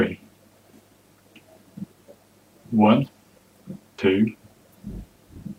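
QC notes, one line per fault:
1.84 s and 3.98 s: damaged data in a compressed stream. Two quick blips, each only a few milliseconds long, where a bit of the encoded stream went bad. The decoder hits frames it can't read properly, spits out a brief glitch instead of real audio, then loses its place and hunts for the next valid frame header before carrying on. That's why each one comes out as a short chirp, squawk, click or tiny hole.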